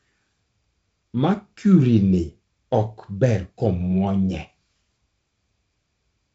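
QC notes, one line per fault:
No faults heard in this speech clip.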